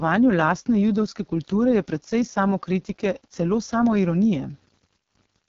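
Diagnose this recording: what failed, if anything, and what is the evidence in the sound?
A sample-format conversion stage likely dropped the speech to a very coarse word length, consistent with 8-bit samples, rounded without dither. Throughout, quiet passages and decays turn gritty, with grainy distortion that tracks the speech and an error floor roughly 40 dB below it.

An AMR wideband (HD Voice) codec in the call path is running at a very low rate, one that points to the lowest AMR-WB mode. Nothing is heard above 7 kHz, and the speech sounds heavily rough and raspy throughout, as the pulse-driven vocal tract model runs short of bits.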